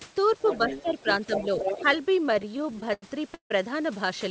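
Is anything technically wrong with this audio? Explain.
Yes. The speech has three kinds of fault.

Other side's voice leaking through appears twice, from 0.40 to 1.16 s and from 1.32 to 1.98 s. A second voice sits under the talker. In the first stretch it is about 10 dB below the speech. In the second it is about 5 dB below. The likely cause is that this device's loudspeaker played the other side into the microphone and the echo canceller left part of it behind.

Speech suppressed in double talk happens from 0.69 to 1.07 s, inside the first leak. The talker's level dips by roughly 10 dB. Altogether about 150 ms are pushed down. This likely happened because both sides spoke at once. The echo canceller could not tell the local voice from the echo, so it attenuated everything together. The talker briefly sounds ducked and uneven.

Repeated stalls (stutter) run from 2.24 to 3.52 s. There are more than a dozen short hitches, and the longest lasts 161 ms. 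About 30 percent of that span is filled sound, 391 ms in total. The receiver ran out of audio each time and stretched the last sound until more arrived. Nothing is lost. The speech still drags and catches, and the longer holds fade.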